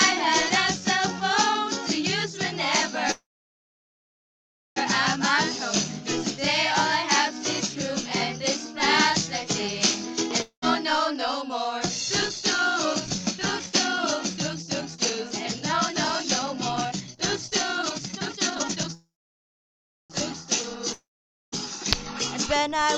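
At 3.11 s a call audio freeze begins, likely because packets were held up in transit and the jitter buffer ran dry. The receiver carries the last sound forward as a fading buzz or hiss, and after about 0.1 s that gives way to silence lasting about 1.55 s. At 4.78 s the audio resumes exactly where it stopped, so nothing is lost, but 1.65 s of extra delay has been inserted.

At 10.42 s a long network dropout follows, most likely a stretch where no packets arrived. The receiver fills with a brief fading continuation and then about 0.11 s of silence. When the audio returns at 10.64 s, 0.2 s of it is gone for good, so the sound jumps ahead.

From 11.08 s to 18.94 s a jitter buffer speed-up runs. The buffer was holding more audio than its target, so the receiver repeatedly cut out pitch-period-sized pieces, roughly a second and a half in total. The sound plays at about 118% speed with unchanged pitch and comes across as clearly hurried.

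At 18.94 s a second call audio freeze starts, likely the buffer emptying again. The fading fill decays into about 1.04 s of silence. At 20.12 s the audio picks up where it left off, with nothing missing and 1.15 s of delay added.

At 20.93 s a second long network dropout, likely from packets lost in transit, produces a short fade and then about 0.5 s of silence. Playback resumes at 21.54 s with 0.6 s of audio skipped.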